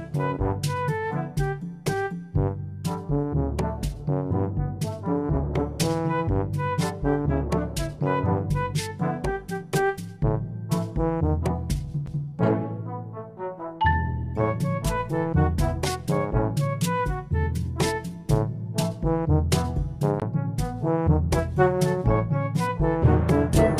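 At 12.06 s there is a brief tick and a gap of roughly ten milliseconds, and the sound then resumes from a different point rather than continuing smoothly. The same happens between 20.20 and 20.22 s, with a slightly longer gap of about twenty milliseconds. Both are CD skips: the player's laser lost its track and landed on another turn of the disc's spiral, muting briefly while it relocked before playing on from the new position.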